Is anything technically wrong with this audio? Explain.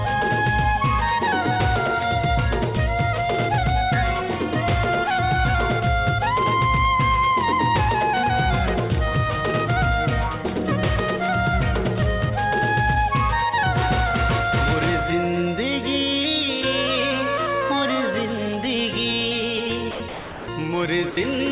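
Yes. Near the end, the sound gives way to steady, featureless noise three times: at 19.91 to 20.0 s, at 20.09 to 20.48 s, and at 21.11 to 21.17 s, the longest gap lasting 390 ms. This is sound dropped by the voice detector. The sending side's detector likely judged the audio to be background and stopped transmitting, so the receiver filled the gaps with comfort noise. The real sound returns each time the detector triggers again. Throughout, the call path's bandwidth is audible, with nothing above 4 kHz.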